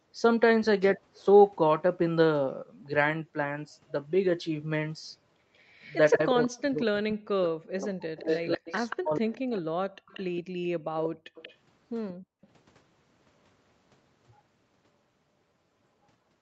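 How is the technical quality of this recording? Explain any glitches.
The recording has clear echo-control faults concentrated between 5.56 and 12.47 s, all typical of a speakerphone call. The call's microphone processing limits content to 8 kHz and below.

Echo leak appears at 5.56–6.66 s and again at 8.17–12.47 s. The far end's echo canceller likely failed to fully remove its loudspeaker's output, so a copy returns 187 ms late. The first stretch is faint. The second is far stronger, sitting behind the sound.

Speech suppressed in double talk runs from 6.14 to 9.92 s. With both sides active, the canceller likely couldn't separate the local talker from the returning echo and pulled everything down. The speech dips deeply, about three seconds in total.

Background gated by the echo canceller occurs at 10.43–12.42 s. While the loudspeaker was playing, the canceller clamped the microphone, dropping the room sound by about 40 dB in brief gaps, less than a second in all, before releasing.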